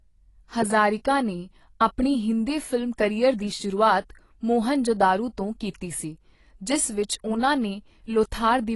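AAC compression, present from start to finish of the speech, has plainly audible damage and points to a low-bitrate encode, consistent with roughly 32 kbps. Nothing is heard above 11.5 kHz, because the encoder lowers its cut-off when bits run short. The likely cause is the coarse quantisation of each frame's frequency lines, which leaves gaps in the spectrum. This makes the sound dull and smeared, with a warbling, fizzy edge on sustained sounds and sibilants.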